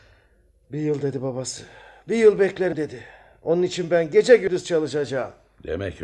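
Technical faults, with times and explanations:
2.72 s and 4.47 s: compressed frames skipped. The speech jumps ahead about 70 ms, then 100 ms, fitting whole 26.1 ms frames. Overlapping frames leave a smeared seam in the waveform and spectrogram, not a sharp click.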